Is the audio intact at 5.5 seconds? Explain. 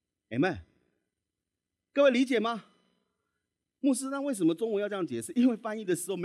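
Yes, at 5.5 seconds the speech runs through cleanly, with no dropout, click, distortion or other fault at that point.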